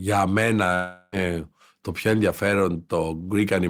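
From 0.74 to 1.13 s the speech stops and the last sound is stretched into a fading buzz, likely a long network dropout; about 380 ms never returns.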